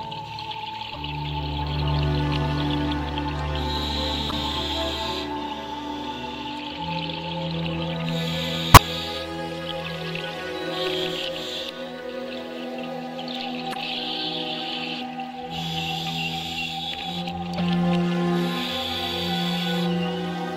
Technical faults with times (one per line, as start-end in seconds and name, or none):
0.90-0.96 damaged data in a compressed stream
4.27-4.33 damaged data in a compressed stream
8.74-8.80 damaged data in a compressed stream
13.70-13.76 damaged data in a compressed stream
17.54-17.60 damaged data in a compressed stream